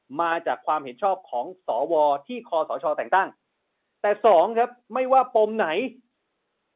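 Nothing goes wrong anywhere in this speech, which simply carries the usual narrow, telephone-band sound of A-law G.711 coding at 8 kHz, with nothing above 4 kHz.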